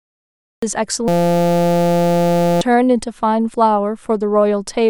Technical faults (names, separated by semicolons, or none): cut-off start; system hang loop